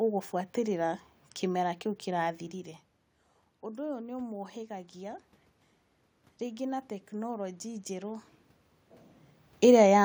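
At 3.62 s the automatic gain control starts rising, having caught the input dropping by about 12 dB after the talker moved back around 2.5 s. It eases up by about 3 dB until 5.3 s, so the voice and room noise swell together.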